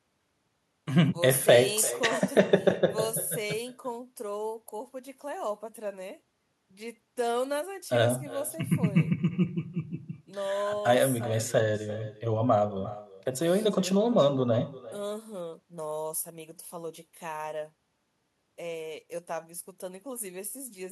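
From start to finish the speech carries an echo with no canceller: every phrase returns a little under a third of a second later, about 17 dB below the original, and thinner. A loudspeaker at the far end is feeding the microphone there, and nothing subtracts that path before it travels back. Unlike room reverberation, which smears the sound into a continuous tail, this is one distinct, delayed copy that trails each phrase.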